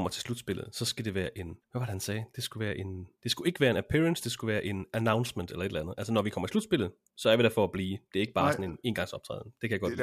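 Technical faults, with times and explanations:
No technical faults are present.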